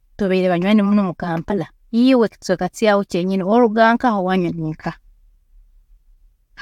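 At 1.49 s, compressed frames are skipped: whole coded frames never reach the output, so the speech jumps forward by about 50 ms, which fits roughly two frames of 23.2 ms.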